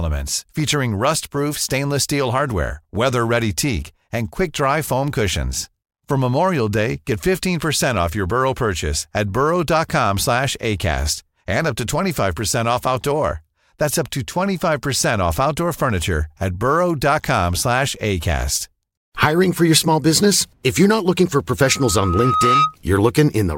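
At 21.62 s a loudspeaker feedback squeal begins. A microphone is picking up the loudspeaker it feeds, and at 1.3 kHz the loop gain has gone past one. That single tone feeds on itself. It swells over about a second into a piercing whistle above the speech, ending up roughly 5 dB louder than it. The squeal stops at 22.76 s.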